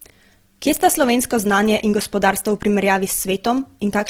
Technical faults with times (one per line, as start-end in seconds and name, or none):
0.00-4.10 Opus compression